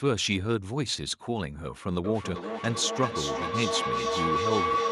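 Right around 2.04 s a feedback howl kicks in and doesn't let go before the clip ends. It sounds like two devices in the same room on one call: the sound goes out a loudspeaker, back into a microphone, and comes round a bit louder each pass. The repeats narrow to a tone somewhere near 1 kHz, coming round roughly every 400 ms, and it climbs until it's about as loud as the speech itself.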